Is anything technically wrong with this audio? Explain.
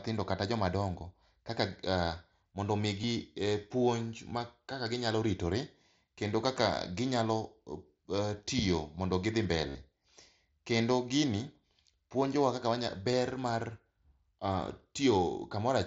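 Yes, concealed Bluetooth headset packet loss occurs at 3.02 s, 9.69–9.75 s just after "tiyo mondo gidhi", and 13.12 s. Lost headset packets were patched by repeating recent waveform. The 52 ms gap gives a brief buzzy sustain with a warble on recovery, not a dropout's silence. The two other losses are brief, 15 ms each. The mSBC codec limits speech to 8 kHz.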